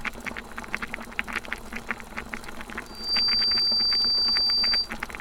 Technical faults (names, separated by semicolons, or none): loudspeaker feedback squeal